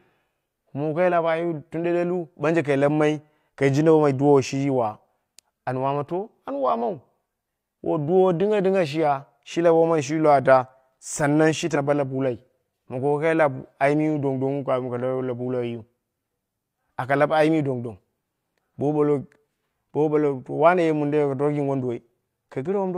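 At 11.71 s, running to 11.77 s, the speech jumps forward as compressed frames are skipped: the decoder never played a short run of coded blocks, about two frames at 42.7 ms each, so roughly a tenth of a second of audio is simply gone. Unlike a dropout, no silent gap replaces it.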